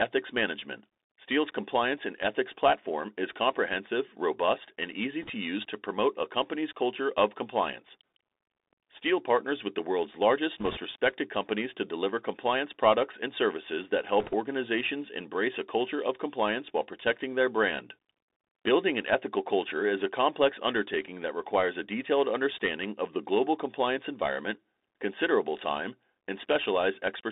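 From the start, the speech carries the Bluetooth CVSD headset codec: the band runs only from 250 Hz to 3.7 kHz, sibilants come out scratchy, and a granular hiss sits under everything. This fits a 64 kbit/s one-bit delta stream whose adaptive step lags fast, loud high-frequency detail.

Bit errors on a Bluetooth voice link then hit three short stretches. The first runs from 5.22 to 5.29 s, between "comprehensive robust and easy" and "use to promote a". The second runs from 10.59 to 10.78 s, after "with the world's largest". The third runs from 14.20 to 14.34 s, before "organizations embrace a culture". Each flipped bit nudges the delta signal only slightly, so there are no sharp clicks. Instead a rushing crackle appears at an error rate of roughly 2 percent, rising to about 3 percent in the last burst.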